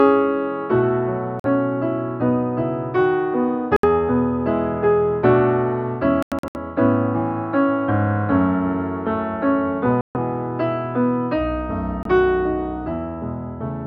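Bluetooth dropouts cut the sound at 1.40 s, 3.76 s, 6.23 to 6.56 s (broken gaps, longest about 93 ms), 10.01 s and 12.03 s, likely from packets arriving too late to reach the headphones. Each hole, 23 to 139 ms, has abrupt or briefly faded edges, and the sound resumes as if it had played on.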